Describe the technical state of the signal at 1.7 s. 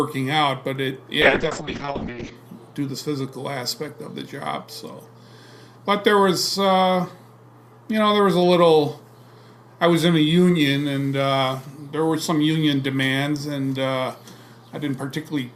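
At 1.7 s the signal is inside a call bitrate drop running from 1.23 to 2.41 s. The bandwidth estimate collapsed and the encoder was forced far down, to a rate that sounds like roughly 6 kbps against the earlier 96 kbps, holding at that floor for about 1.08 s. Coarse coding leaves the sound rough and watery, and the audio bandwidth narrows from 20 kHz to 8 kHz, so the top end goes muffled until the rate recovers.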